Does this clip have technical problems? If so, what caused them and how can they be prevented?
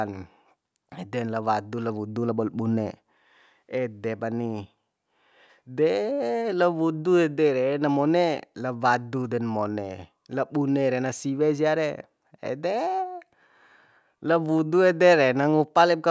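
No, nothing in this speech recording points to a technical problem, so there's no cause to track down or anything to prevent.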